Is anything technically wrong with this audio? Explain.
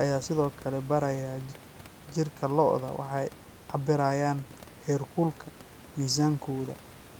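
No, nothing here is technically wrong.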